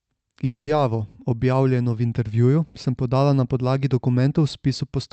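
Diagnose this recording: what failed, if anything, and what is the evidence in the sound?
A network-stage fault, most likely a long network dropout, runs from 0.45 to 0.69 s. The sound does not simply stop. It turns into a smeared, buzzy continuation of the last moment that fades away, leaving near-silence, and then the audio resumes with the intervening part gone rather than delayed. That synthesized fading tail, followed by lost content, separates it from a driver buffer underrun, which would give a hard click or gap with nothing filled in.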